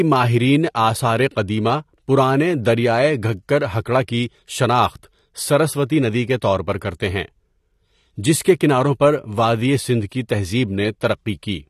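Throughout, the speech has nothing above 12.5 kHz and carries plainly audible coding damage, likely AAC compression at a low bitrate consistent with 32 kbps.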